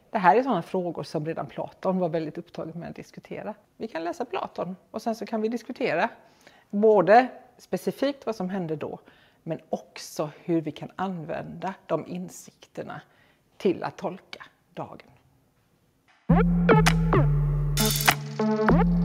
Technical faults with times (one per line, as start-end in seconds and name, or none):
none